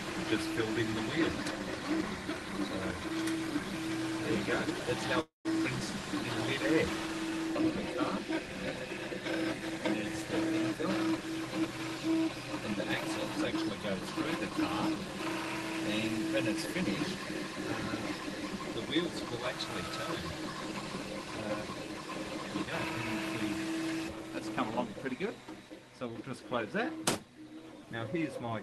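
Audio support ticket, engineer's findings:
Call audio freeze, 5.21–5.47 s: sound stalls, last bit drawn out as a fading buzz, then about 150 ms of silence before resuming exactly where it stopped. Nothing lost, 240 ms of filler inserted. Likely cause: delayed packets draining the jitter buffer, with playout delay growing by 240 ms.

Jitter buffer speed-up, 10.75–12.62 s: sound runs hurried at unchanged pitch, about 7% fast, roughly 150 ms trimmed. Further milder stretches at 13.52–15.09 s and 17.53–18.75 s, each about 3% fast, a few tens of ms removed. Component: jitter buffer dropping pitch-period-sized slices to shed the backlog after the delay build-up. High end of the call path stops near 12 kHz.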